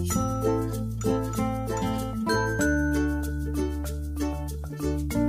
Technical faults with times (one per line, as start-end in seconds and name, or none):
none